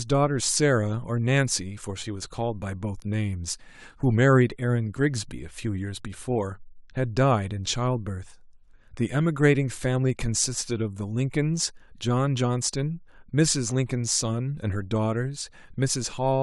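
No technical faults can be heard anywhere in this speech recording. There is nothing that calls for a timestamp or an account of something going wrong.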